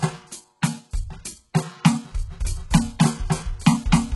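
HE-AAC compression runs through the whole clip. Nothing above 11.5 kHz remains, and the top band sounds rebuilt rather than captured: the codec has likely kept only the lower spectrum and synthesised the treble by copying lower bands upward under a coarse envelope. Because those copied harmonics do not align across the crossover, bright sounds in the music come out gritty and metallic. The damage is heavy, consistent with a very low bitrate around 12 kbps.

Pre-echo appears at 0.61 s. A brief hiss, about 16 ms long, arrives just ahead of a sharp attack. A transform codec spreads its quantisation noise across an entire block. When the onset falls late in that block, noise sized for the loud attack also spills into the quiet instant before it. The hiss comes first and the attack itself sounds softened and smeared.

A doubled audio track begins at 2.40 s and continues to the end. A second full-band copy of the music trails the original by roughly a third of a second, at about the same loudness. 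It carries no decay or room colouring, and it cuts in abruptly. The likely cause is that the same audio was mixed in twice, either through a slower second capture path or an edit that left two copies out of step.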